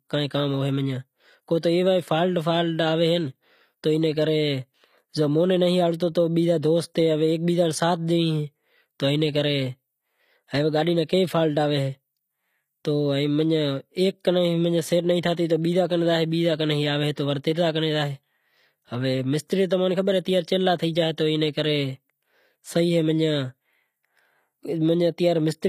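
Throughout the speech, the treble sounds bright but synthetic, with gritty, lispy s sounds and nothing above 15.5 kHz. This is likely HE-AAC compression rebuilding the highs by band replication, which fits a bitrate near 24 kbps. Unlike plain lowpass dullness, the top is present but falsely textured. At 17.16 s, pre-echo puts a brief hiss about 14 ms ahead of an attack, smearing it. Unlike a click, the noise comes before the onset, not on it.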